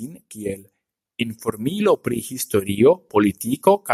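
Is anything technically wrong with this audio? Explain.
Yes. From 1.72 s to 3.46 s the level climbs steadily, voice and background rising together by about 4 dB over nearly two seconds. This is automatic gain rising: the automatic gain control judged the incoming signal too quiet and pushed its gain up gradually, and because it amplifies everything it receives, the background swells right along with the speech.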